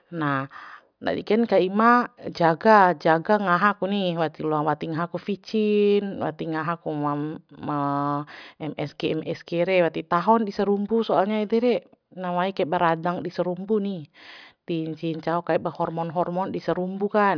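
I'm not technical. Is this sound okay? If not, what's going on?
Yes, nothing here sounds wrong to me.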